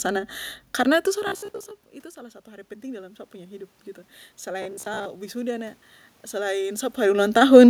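Robotic sound from repeated short buffers, 1.27 to 1.74 s: the speech turns into a rigid, metallic buzz near 66.7 Hz. Audio is likely arriving too seldom, so the player repeats roughly the last 15 ms, standing in for about half of the real signal.

Automatic gain rising, 2.13 to 3.78 s: after the input level drops by about 21 dB, the gain control responds gradually, lifting its gain by about 6 dB. Voice and room noise swell together across that stretch rather than jumping.

Robotic sound from repeated short buffers again, 4.62 to 5.06 s: the same 66.7 Hz metallic buzz returns. It is consistent with the player re-running roughly 15 ms chunks in place of about half of the real audio.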